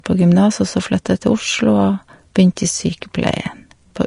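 From start to finish the speech carries plainly audible Vorbis compression damage, most likely from encoding at a low bitrate, and the graininess fits something near 37 kbps. Nothing is present above 10.5 kHz, so a spectrogram shows a hard flat ceiling there. Beneath it, the coarsely quantised upper band has lost its fine detail and been replaced by noise of similar energy, heard as hiss, roughened tones and blurred consonant attacks, and seen as speckled, smeared texture rather than clean harmonic lines.

At 3.01 s a brief pre-echo lasting about 10 ms precedes a sharp onset. The codec spread its quantisation noise across the whole transform block, so noise scaled for the loud attack leaked into the quiet moment just before it. This is heard as a short hiss that anticipates the attack, which sounds softened. On a waveform, low-level fuzz appears ahead of the transient, and a spectrogram shows a thin broadband smear leading into the onset.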